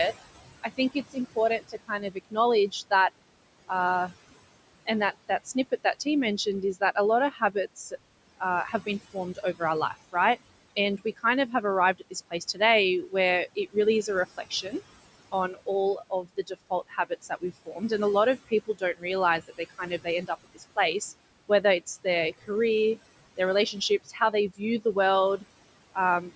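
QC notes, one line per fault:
Throughout: noise suppressor artifacts. The room noise, about 16 dB below the speech, is pulled down by about 20 dB in pauses and rises back under speech, because the suppressor attenuates noise-classified bands frame by frame.
0.62–2.92, 4.86–6.06, 6.74–14.73, 15.31–17.91, 18.49–22.49, 23.37–26.32 s: speech cut by the noise suppressor. Quieter parts of the speech, such as soft consonants and word endings, were classed as noise and turned down by about 12 to 20 dB. This totals roughly 0.1 to 1 s per span, so they sound swallowed.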